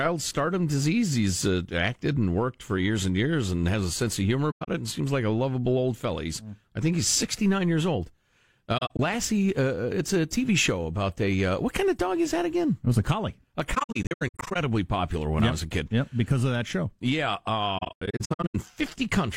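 AAC frame loss with muting punches soft-edged holes at 4.50–4.69 s (after "a sense of humor"), 8.77–9.00 s (before "uh it's a"), 13.74–14.56 s (before "popular when yep I") and 17.77–18.55 s. Lost frames decode as silence, faded through overlapping windows.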